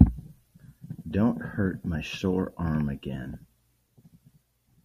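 DAB burbling at 3.30 to 3.34 s, just after "my sore arm": residual bit errors, a few per thousand bits, escaped error correction into the MP2 data. The errors hit six frames, putting short noise blips into sub-bands, producing a brief burbling over the speech.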